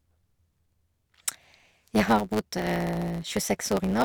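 From start to finish the speech carries a steady buzz at 109 Hz and runs about 1.09 times fast while keeping close to its natural pitch. This is a block size mismatch (truncated): one stage hands over blocks longer than the next stage takes in, and the tail of every block is discarded. Those regular cuts, 109 times a second, make the buzz, and the lost material makes the speech hurry along by the ratio of the two block sizes.

Between 0.47 s and 3.91 s, a regular click recurs about every 0.69 s while the speech is sounding, roughly seven times in all. These are clock drift buffer slips, likely caused by two devices running on separate clocks that disagree by around a tenth of a percent. The buffer between them slowly fills or drains until a small run of samples is dropped or repeated, and each such jump in the waveform is heard as a click at that steady interval.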